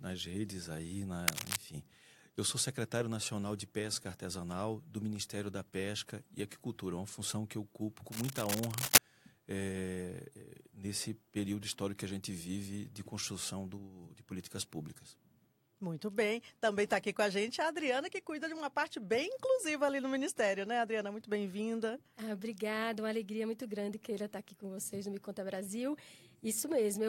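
A worn cable, connector or control being disturbed is the likely cause: its contact resistance jumps about erratically, injecting dense, irregular noise into the signal. This cable scratch noise first appears from 1.28 to 1.58 s as a brief scratchy rustle at roughly the same level as the sound itself. It returns from 8.10 to 8.98 s, longer and somewhat louder than the sound, rasping over it for nearly a second.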